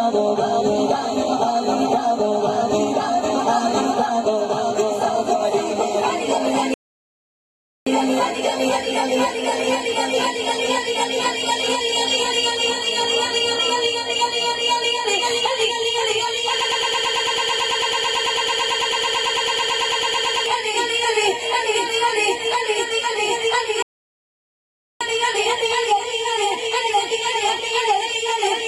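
A playback stall at 6.74 s cuts the sound off mid-flow, leaving about 1.13 s of silence before it resumes at 7.87 s. The player most likely ran short of data or had its output thread blocked, so nothing reached the output until it recovered.

A broken-record loop runs from 16.61 s to 20.46 s. A fragment about 110 ms long repeats exactly, back to back, 35 times, giving a rapid mechanical stutter that lasts nearly four seconds. The likely cause is a stalled player or stream that kept resending the last buffer it held, so whatever should have played across that span is lost.

A second playback stall follows at 23.82 s. The sound again drops out abruptly, this time for about 1.18 s, and resumes at 25.01 s. The mechanism is likely the same starved or blocked output as the first stall.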